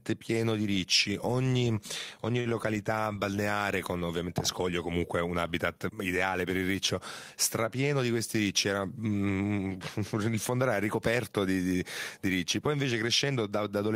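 A speech clip with two short stalls from a late packet, just after "di ricci ogni ogni": at 2.40–2.47 s (about 50 ms stretched) and 2.49–2.53 s (17 ms), before "balneare con". Each time the jitter buffer ran dry and the last sound was held, so a spectrogram shows frozen, flat-smeared harmonics, with nothing lost.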